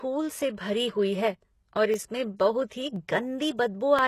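From the start, the speech carries plainly audible damage consistent with HE-AAC compression, likely at a low bitrate around 16 kbps. Nothing is present above 12.3 kHz, and the treble below that limit sounds synthetic. It has been rebuilt by copying lower bands upward under a coarse envelope rather than coded directly. That leaves the upper harmonics misaligned with the lower ones, so sibilants take on a gritty, metallic edge.

From 0.92 s to 3.99 s, a regular click recurs every 1.02 s, about four in all. These fit clock drift buffer slips. Two devices are likely running on slightly mismatched clocks, on the order of 300 ppm apart. The buffer between them gradually drifts until a block of roughly 15 samples is dropped or repeated. Each slip breaks the waveform's continuity, which is heard as a brief click over the speech at a steady interval.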